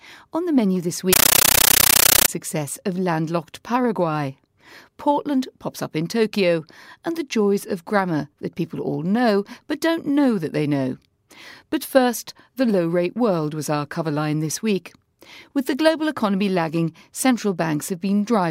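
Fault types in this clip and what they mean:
compressed stream played as audio: a Dolby Digital bitstream was passed through undecoded as ordinary samples, so from 1.13 to 2.28 s the speech becomes loud static chattering 31 times a second.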